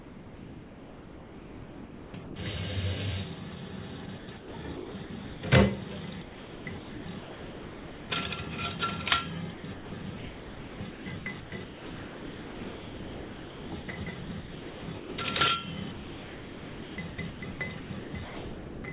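Sound chopped by the voice detector at 0.00–2.36, 4.06–5.42, 6.22–8.10, 9.54–15.18 and 15.92–18.84 s, likely from the sender's voice detector repeatedly gating transmission. Quieter stretches were swapped for comfort noise: about 2.26 s, 0.7 s, 1.62 s, 4.22 s and 2.18 s respectively. The sound turns choppy. Throughout, the call path passes nothing above 4 kHz, which fits a narrowband G.711 link.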